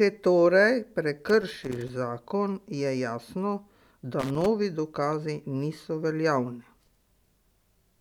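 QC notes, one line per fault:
1.29–1.89 s and 4.19–4.46 s, loose connector crackle: irregular bursts of scratchy crackle, ending just before "zakon je jasno" and "dokazi niso". A worn contact makes and breaks as it moves, chopping the signal and adding pops from any DC on the line. The waveform shows ragged dropouts and sharp spikes. The spectrogram shows scattered broadband vertical streaks cutting across the speech.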